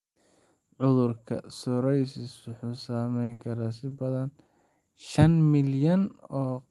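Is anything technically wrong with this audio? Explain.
Yes. Between 3.23 and 3.41 s there are two back-to-back bursts of packet loss, at 3.23 to 3.31 s and 3.33 to 3.41 s. Each sounds like the last sound being stretched into a held buzz or fading hiss for about 60 ms before the audio jumps ahead with a piece missing. In each burst, a run of packets was lost or arrived too late to play. The receiver extended and faded the last sound to cover the gap, then resumed about 60 ms further on.

Two short concealed packet losses follow, at 3.89 to 3.93 s and 4.45 to 4.49 s. Each is a quick smear or small wobble lasting about 20 ms. Here about 20 ms of audio missed the decoder. The receiver bridged the hole by continuing the previous sound, following its pitch if voiced or using shaped noise if not, then crossfaded back into the real audio.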